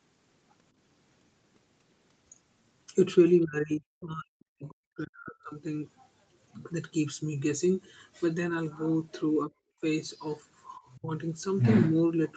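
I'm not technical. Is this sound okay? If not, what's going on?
No, not quite. From 3.43 to 5.61 s the voice sinks almost to nothing, with shorter dips at 9.46 to 9.51 s and 10.97 to 11.10 s. That's speech suppressed in double talk, likely the call's echo canceller ducking the voice when both sides talked at once. At 5.97 to 6.04 s there's a very faint snippet of the other side's voice leaking through, likely echo the call didn't fully remove.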